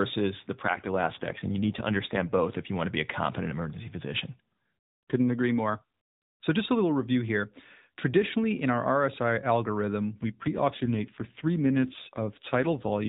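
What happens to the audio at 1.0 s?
At 1.0 s the speech sits inside an AMR rate drop running from 0.54 to 2.45 s. The codec falls back to a lower mode, consistent with 12.2 to 5.9 kbps, so the voice turns rougher and more synthetic without any gap or loss of bandwidth.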